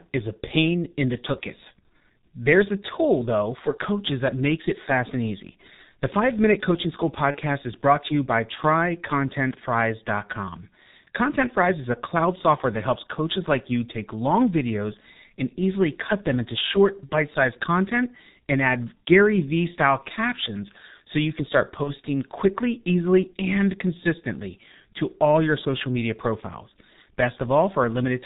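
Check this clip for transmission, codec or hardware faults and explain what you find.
Two faults are present: a low-rate speech codec throughout the clip and three brief dropouts that the codec fills in.

G.723.1 codec, throughout: the speech is band-limited below 4 kHz and sounds muffled and hoarse, with smeared consonants. The heavy coding damage fits the 6.3 kbit/s mode, where 30 ms frames and a slowly updated vocal model cannot track fast articulation.

VoIP packet loss concealed by the speech codec, at 7.31–7.38 s just before "is brought to you", at 17.06–17.10 s between "easily cut them into" and "bite sized content and", and at 21.83–21.91 s between "so you can start" and "quickly easily and consistently". Each gap fits a single lost 30 ms frame. The decoder repeats its last pitch and filter at falling gain, producing a short buzzy or noisy, fading smear that stays weak or distorted as the next frames recover.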